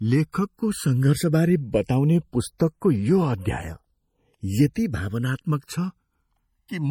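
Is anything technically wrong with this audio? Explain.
Yes. Three faults are audible.

Throughout, the two channels ran on separate clocks a few hundred parts per million apart, so their offset slid to about a millisecond. Mixed to mono, this produces slowly sweeping comb notches, heard as slow flanging.

Throughout, a low-bitrate encoder, likely MP3 at around 48 kbps, dropped weak frequency lines frame by frame and cut everything above 20.6 kHz. The plainly audible result is a watery, swirly texture with smeared attacks.

At 0.32 s, at 2.58 s, and from 4.74 to 4.76 s, the codec spread block noise ahead of sharp attacks by 15, 18 and 20 ms. This produces pre-echo, a brief hiss before each onset that softens the attack.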